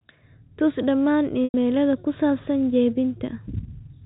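At 1.44 s the speech breaks up for about 100 ms, to 1.54 s: packet loss with pitch repetition. The receiver covers the gap by looping the last pitch period, so the sound first holds as a brief buzzy tone, then fades to silence over about 50 ms before the speech resumes through a short cross-fade. The gap length fits five 20 ms packets going missing. The G.711 telephone coding carrying the speech keeps everything under 4 kHz.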